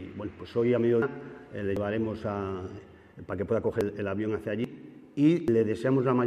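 At 1.02, 1.77, 2.79, 3.81, 4.64 and 5.48 s the sound jumps ahead, likely from a dropped buffer (overrun), losing roughly a tenth to a third of a second each time. Unlike an underrun, no silent gap is inserted; the two sides simply butt together.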